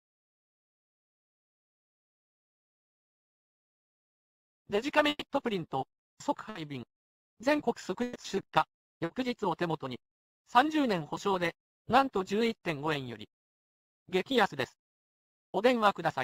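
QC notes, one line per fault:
5.09–5.23 s, 6.49–6.57 s, 8.03–8.17 s, burst of packet loss: consecutive packets arrived too late or not at all. The receiver extends the last sound and fades it over about 120, 60 and 120 ms, then jumps ahead. The first gap ends in about 30 ms of silence.
9.05–9.11 s, short concealed packet loss: about 40 ms of audio missed the decoder's deadline. It was patched by continuing the preceding sound and crossfading back, so a brief smear or wobble can be heard.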